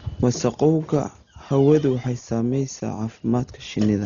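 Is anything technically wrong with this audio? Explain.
Yes. Throughout the speech the sound is heavily degraded: it is dull, with nothing above about 6.9 kHz, and a rough, fluttering noise sits around tonal parts. This is likely Dolby Digital compression at a very low bitrate, around 32 kbps. At that rate the encoder narrows the band and leaves many frequency lines without mantissa bits. The decoder fills those lines with dither noise, which causes the rough, unstable texture.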